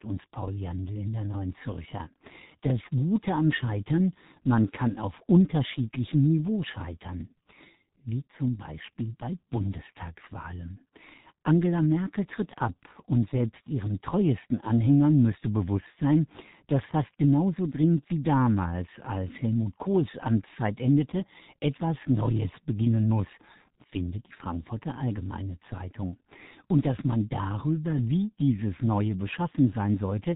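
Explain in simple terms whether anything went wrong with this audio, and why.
G.723.1 codec damage runs through the whole speech clip. This old internet-phone codec squeezes speech into tiny packets, discarding everything above 3.8 kHz and rebuilding the voice from a coarse, slowly updated model, so it sounds muffled and hoarse, with smeared consonants.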